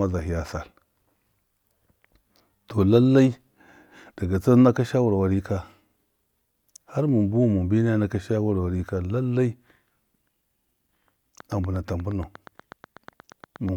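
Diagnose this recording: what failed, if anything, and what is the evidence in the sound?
A train of clicks runs from 11.4 to 13.7 s: about twenty identical ticks at a steady 8.33 per second, as loud as the speech itself. The even spacing likely points to periodic interference coupling into the analogue wiring or a struggling interface.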